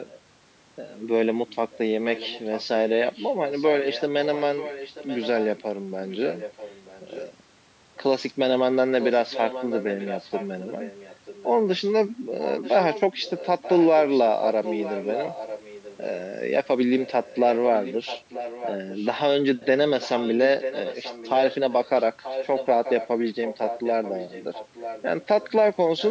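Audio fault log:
1.71–5.47 s, 6.09–7.33 s, 9.0–11.81 s, 12.39–16.2 s, 17.02 s to the end: echo leak. A quieter copy of the speech trails it by about 0.94 s, quieter at first and louder from 9.0 s. The likely cause is a far-end loudspeaker's residue that its echo canceller missed. On a spectrogram, shifted duplicate harmonic patterns appear; on the waveform, low secondary envelopes fill the gaps.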